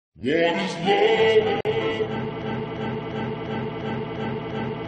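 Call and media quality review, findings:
Gap at a join of encoded pieces: 1.61–1.65 s. Continuous sound drops into a 44 ms gap with smeared edges, then resumes where it stopped. Separately encoded segments were joined untrimmed, so the encoder start delay and last-frame padding remain.

Broken-record loop: 2.42 s to end. The same 348 ms fragment repeats back to back seven times, and the audio that should play there is lost. Likely cause: a stalled player, encoder or stream resending its last held fragment.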